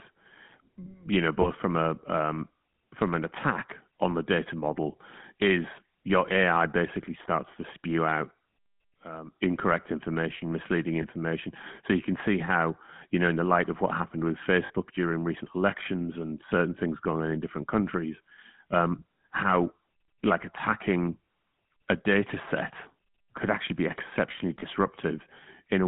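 The whole clip runs through the GSM full-rate codec. Its speech carries a buzzy, gravelly roughness that is plainly audible. The band is cut to about 150 Hz to 3.4 kHz, and the coding fits a 13 kbps rate.

Lost GSM frames occur at 1.42 s, 11.02 s, 14.66 s and 24.6 s. Each gap is 20 ms, except 40 ms at 14.66 s. The decoder repeats the last good frame's settings, so each gap is heard as a brief rough, metallic ring.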